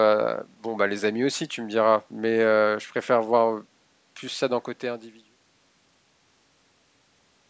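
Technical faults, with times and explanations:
No technical faults are present.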